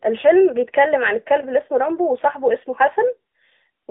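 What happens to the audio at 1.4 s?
At 1.4 s the speech carries AMR narrowband mobile codec damage, present across the whole clip rather than starting there. The codec rebuilds the voice from a vocal-tract model excited by a few pulses per 5 ms subframe, and its plainly audible buzzy, synthetic edge fits a mid-rate mode near 10 kbps. The sound sits in a line band of roughly 250 Hz to 3.5 kHz. A simple telephone band-pass filter would narrow the sound the same way but would leave the voice natural, without that coded buzz.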